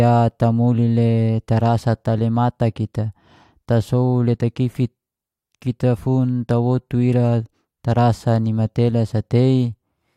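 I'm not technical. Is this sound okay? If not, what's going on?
Yes, nothing in this speech recording points to a technical problem with how it was captured, stored or played back.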